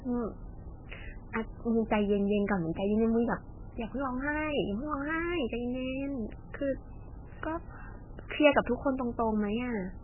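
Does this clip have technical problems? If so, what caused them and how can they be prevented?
Yes. Across the whole speech clip there is nothing above 3 kHz, so sibilants lose their hiss and the sound is dull and boxy. The remaining band is watery and swirly, with weak components flickering in and out between frames and consonant onsets smeared. This is likely heavy MP3 compression at a very low bitrate, consistent with about 8 kbps, where the encoder cuts the treble and drops quiet detail to save bits. To prevent it, encode speech at 64 kbps or higher, or keep a lossless copy.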